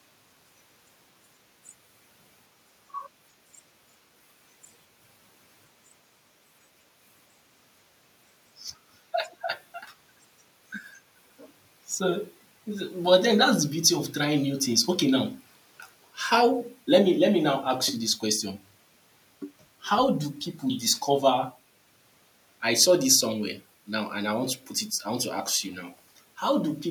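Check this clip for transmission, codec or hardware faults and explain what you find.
No transmission, codec or hardware faults.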